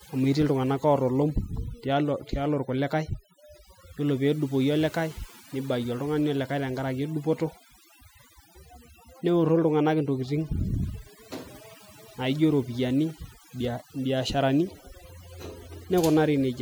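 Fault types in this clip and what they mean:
Overdone noise removal: noise reduction set too aggressively, gating frequency bands near the noise floor throughout, leaving twinkling specks in near-silent gaps and taking quiet parts of the speech with them.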